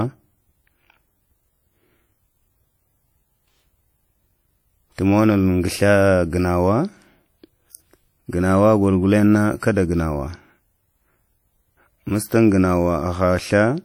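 Speech runs throughout with plainly audible WMA compression: a washy, ringing smear and hiss that swells and fades with the speech, which fits a low bitrate near 48 kbps. Content still reaches about 20.1 kHz, so this is likely transform-codec quantisation noise, not band-limiting.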